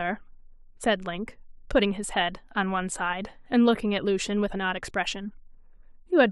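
No technical faults can be heard anywhere in this recording of speech; the signal holds steady throughout.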